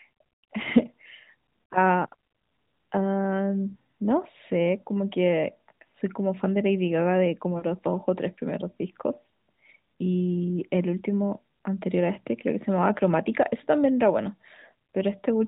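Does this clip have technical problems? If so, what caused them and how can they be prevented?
Yes. Lost AMR speech frames occur from 7.58 to 7.65 s. This 40 ms gap fits two dropped 20 ms frames. The decoder repeated its last good pitch and vocal tract settings at falling gain, so the sound briefly smears and dips. On a spectrogram, already capped at 4 kHz by the narrowband codec, the harmonics run flat and fade, and the waveform shows a shrinking, repetitive envelope. Better radio coverage or stronger channel error protection would prevent it.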